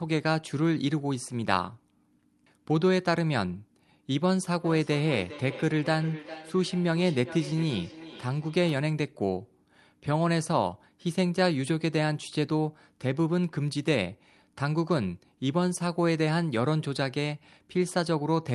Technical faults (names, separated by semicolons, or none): feedback echo between two devices